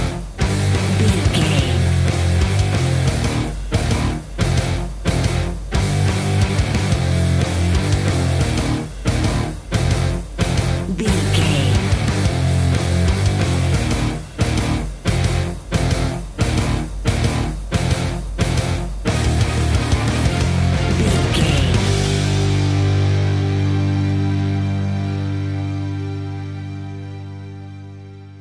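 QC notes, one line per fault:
Throughout: aliasing. High content folds back below 11 kHz as gritty, metallic tones, roughly 25 dB down, fitting a drop to 22 kHz without filtering.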